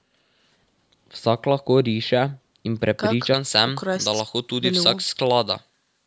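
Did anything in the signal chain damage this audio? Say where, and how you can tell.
Yes. From 3.34 s to the end of the speech at 6.07 s, pre-emphasis was left on: a treble boost applied for recording or transmission was never undone by the matching de-emphasis. The tilt fits a J.17 curve, lifting 10 kHz about 11 dB above 1 kHz, so the sound turns thin, bright and sibilant. On a spectrogram, the upper band up to the 8 kHz call-processing ceiling brightens abruptly at 3.34 s.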